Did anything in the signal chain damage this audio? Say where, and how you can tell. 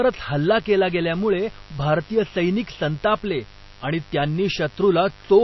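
Yes. Mains buzz enters in the analogue wiring. A raspy 50 Hz buzz runs throughout, about 25 dB below the speech. Switching spikes add the rasp.

The codec stage is next. The speech sounds watery throughout. This is likely MP3 compression, which fits a 24 kbps bitrate.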